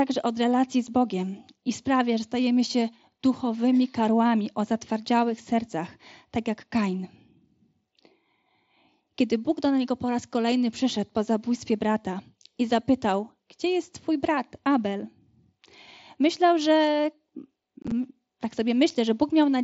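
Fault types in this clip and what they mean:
Unconcealed Bluetooth headset packet loss: headset audio went missing and nothing patched the gaps. There is a 7.5 ms hole at 0.87 s after "od relacji z", then 37.5 ms lost across 90 ms from 17.82 s. These show as flat, sharp-edged waveform dropouts and thin vertical spectrogram gaps.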